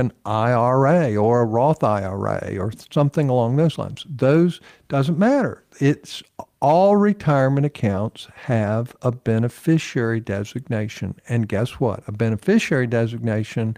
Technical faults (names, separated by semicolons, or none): none